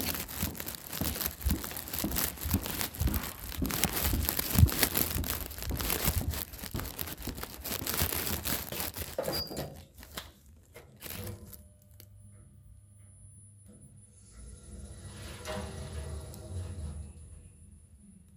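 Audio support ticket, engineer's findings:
DAB burbling, 2.00 to 2.28 s. Burbling blips over the sound. Weak reception lets residual bit errors, roughly 0.15 percent, past error correction into MP2 data. Corrupted data disturbs sub-bands across a run of about a dozen frames.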